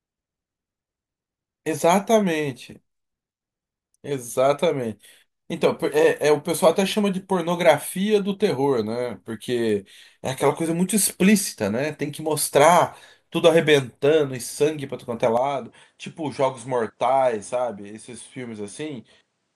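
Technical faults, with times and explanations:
15.37–19.55 s, input switched to a poorer device: the speech abruptly loses everything above 10.5 kHz, drops a few decibels in level and picks up a faint new noise floor, with no gap at the switch, likely because recording moved to a narrower-band microphone.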